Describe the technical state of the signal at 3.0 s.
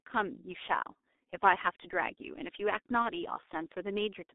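At 3.0 s you're hearing the G.723.1 codec damage that runs through the whole clip. The speech is squeezed into roughly 250 Hz to 3.7 kHz, and the coarse, slow-updating voice model at what sounds like about 6 kbit/s leaves it heavily muffled and hoarse, with smeared consonants.

Right after that, from 3.02 to 3.08 s, there's VoIP packet loss concealed by the speech codec. A gap of about 30 ms, which fits a single lost frame, gets filled by the decoder extrapolating its last pitch and filter while fading the gain. You hear a brief, stretched, fading smear, and the voice stays weak or distorted just afterwards.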